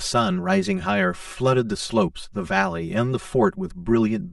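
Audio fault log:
Throughout, channel delay (comb filtering): one channel of the speech reaches the mix roughly 5 ms behind the other, and when the two are folded to mono, whatever they share cancels at regularly spaced frequencies, the first notch sitting somewhere around 100 Hz with further gaps stacked evenly above it. Those fixed holes carve the spectrum into teeth, so the voice comes across hollow and phasey, with a thin, boxy colouring that never moves.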